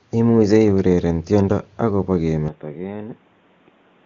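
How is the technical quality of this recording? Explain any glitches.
The recording's quality drops partway through. Its wideband codec carries speech up to about 7.3 kHz, but from 2.48 s to the end the speech turns dull, boxy and about 10 dB quieter, with nothing above 3.8 kHz and a new noise floor roughly 30 dB down. The switch is seamless, with no gap. This is likely an input switched to a poorer device with a narrower band and its own noise.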